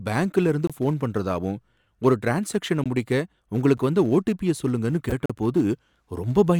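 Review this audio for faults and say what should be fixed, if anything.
Block of digital silence at 0.67–0.70 s (23 ms, just before "போன் பண்றதாவும் ஒரு ட்ரான்ஸாக்ஷன"), 2.84 s, 3.77 s (just before "வந்த ஓடிபிய சொல்லுங்கன்னு") and 5.26–5.30 s (39 ms, right after "வந்த ஓடிபிய சொல்லுங்கன்னு"). In each case the output drops straight to zeros and back with no fade, leaving ticks and short holes in the speech. The 23 ms gap fits a 1024-sample buffer that was not filled in time.

Corrupt frame decoded at 5.10–5.13 s. A couple of damaged compressed frames were played despite their errors. Misread gains and codes put energy at the wrong frequencies, producing a brief glitch that lasts about as long as those frames.

To prevent both, give the audio thread more buffer headroom so it never runs dry, and have the decoder check frame integrity and conceal bad frames instead of playing them.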